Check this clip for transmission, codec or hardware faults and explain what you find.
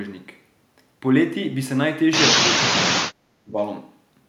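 One fault turns up, from 2.55 to 3.57 s: speech suppressed in double talk. The echo canceller, likely facing both sides talking at once, could not tell this talker apart from the returning loudspeaker echo and so pulled the whole signal down. For roughly a second the speech sinks sharply, at its deepest by something like 35 dB, before returning to full level after 3.57 s.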